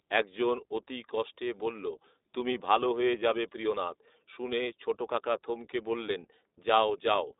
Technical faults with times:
0.00-7.39 iLBC codec

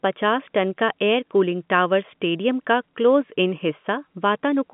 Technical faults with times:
none

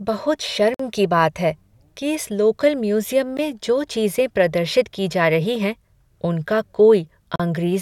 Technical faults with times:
0.74-0.80 Bluetooth stall
3.37 Bluetooth stall
7.36-7.40 Bluetooth stall

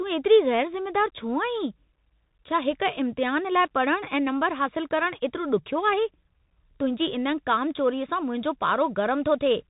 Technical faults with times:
0.00-9.70 Bluetooth CVSD headset codec

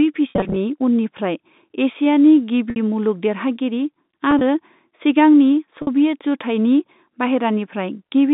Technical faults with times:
0.30-0.56 packet loss with pitch repetition
2.70-2.76 packet loss with pitch repetition
4.31-4.41 packet loss with pitch repetition
5.82-5.87 packet loss with pitch repetition

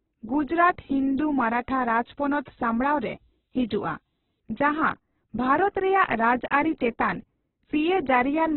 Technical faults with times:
0.00-8.56 Opus compression
1.18-4.40 low bit depth with noise shaping

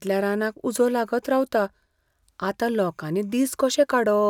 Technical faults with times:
none

